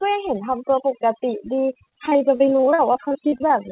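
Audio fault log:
Throughout: overdone noise removal. The background drops to near silence broken by twinkling specks, because an overly aggressive noise reducer pushes any frequency band near its noise estimate far down, taking quieter speech detail with it.
1.56 to 3.52 s: repeated packet loss (robotic sound). The speech turns choppy, with more than twenty short holes up to 40 ms long. Each hole is bridged by stretching the previous sound, so about a quarter of this stretch is patched rather than real. The narrow band, with nothing above 4 kHz, fits the G.711 call path at 64 kbps.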